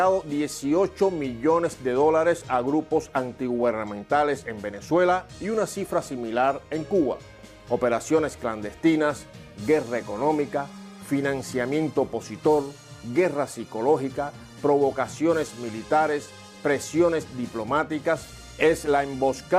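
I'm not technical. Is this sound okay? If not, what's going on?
Yes, no faults to report.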